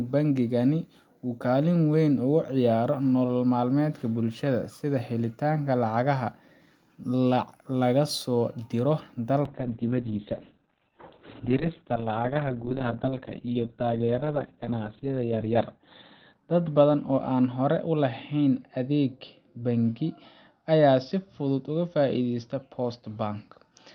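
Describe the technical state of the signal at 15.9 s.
At 15.9 s the signal sits inside a call bitrate drop running from 9.47 s, just after "laga soo diro", to the end. The encoder falls from 48 to 6 kbps, coarsening the speech and cutting bandwidth from 20 kHz to 4 kHz. It sounds muffled and watery. A spectrogram shows a flat ceiling near 4 kHz.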